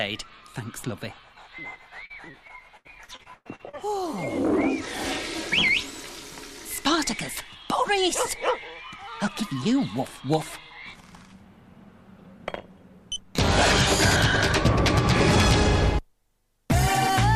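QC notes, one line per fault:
2.05–3.75 s: repeated packet loss (robotic sound). Dropouts arrive in quick succession, the longest 101 ms. Each is bridged by extending the preceding sound, so about a quarter of the stretch is concealment fill. This gives a choppy texture with pieces missing.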